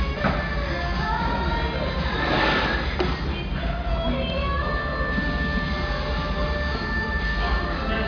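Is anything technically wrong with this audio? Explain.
No, nothing in this recording of sounds points to a technical fault, as the signal holds steady and intact across its whole duration.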